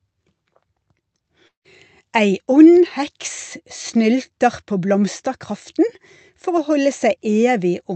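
From 1.47 to 1.67 s the speech cuts out, likely a long network dropout: 180 ms never arrived, so the last sound smears into a fading buzz, then 130 ms of silence. A spectrogram shows blurred harmonics dissolving into a blank gap before speech resumes.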